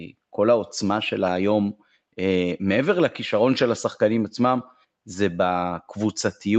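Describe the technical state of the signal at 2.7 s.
At 2.7 s the speech is intact, with no fault present; the top end stops near 8 kHz, as expected from the call microphone processing and the Opus call path.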